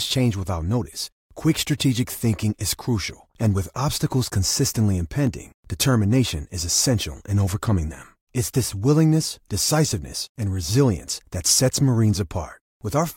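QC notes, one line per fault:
5.27 s, dropped samples: a single sharp click after "and with obstacles consistently", likely from a fraction of a millisecond of missing samples making the waveform jump abruptly.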